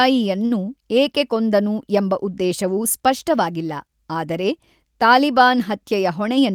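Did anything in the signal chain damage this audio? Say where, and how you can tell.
Yes. At the network jitter buffer, a late packet caused a short stall from 0.45 to 0.66 s: about 51 ms of held sound, nothing lost, just before "ಏಕೆ ಕೊಂದನು ಎಂಬ ಉದ್ದೇಶವು".

A jitter buffer speed-up from 5.92 to 6.55 s trimmed pitch-period slices, about 40 ms in total, to reduce backlog. The speech runs 106% fast at unchanged pitch and sounds hurried.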